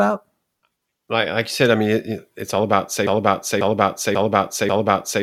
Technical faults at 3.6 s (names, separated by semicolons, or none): broken-record loop